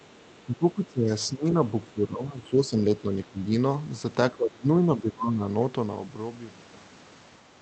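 An echo canceller that likely could not tell the near-end talker from loudspeaker echo while both sides spoke at once turned everything down, causing speech suppressed in double talk at 0.44 to 1.11 s, 1.27 to 3.41 s and 4.31 to 5.44 s. The speech sinks, dropping by about 20 dB in the first and third stretches and about 10 dB in the second.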